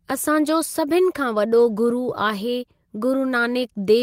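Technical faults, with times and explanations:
1.57–1.59 s, lost packet rebuilt from error correction: right after "असांजो सभिनि खां" a single 20 ms stretch of speech turns briefly rough and grainy rather than dropping out. One packet went missing, and the decoder filled its slot from the low-bitrate duplicate that the following packet carried as Opus in-band forward error correction. That coarser copy keeps the sound continuous but has less detail, so the rebuilt frame comes out noisier than its neighbours.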